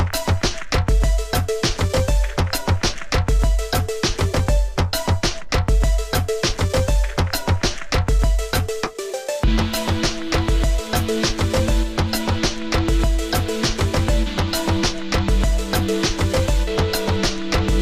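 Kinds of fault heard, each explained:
GSM phone buzz: a nearby 2G handset transmitting in bursts about 217 times a second, with the radio pulses rectified by the audio circuitry into a hard, raspy buzz at 217 Hz and its many harmonics. It runs from 9.40 to 11.42 s, about 29 dB below the signal, and stays steady throughout, as during a call. Its gritty pulse train at 217 Hz, not a smooth tone at 50 or 60 Hz, separates it from mains hum.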